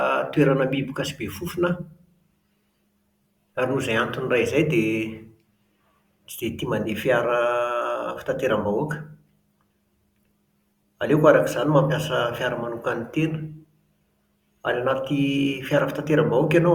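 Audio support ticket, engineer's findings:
Compressed frames skipped, 6.85 s. Decoder dropped about one 10 ms frame, either missing from the stream or rejected as corrupt; playback jumps ahead roughly 10 ms of speech.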